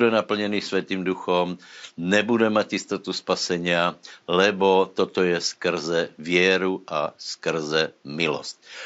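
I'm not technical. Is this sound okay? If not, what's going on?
Yes, no faults are audible in this speech recording, and the faint background noise is just the room the microphone was in, sitting well below the voice.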